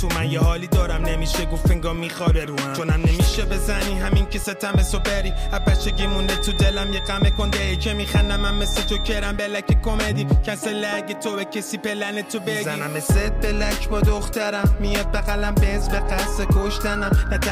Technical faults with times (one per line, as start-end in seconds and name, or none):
4.59-9.17 feedback whistle